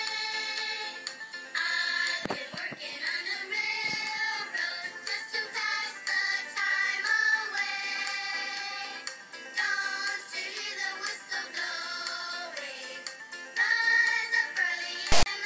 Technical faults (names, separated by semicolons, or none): file tags played as audio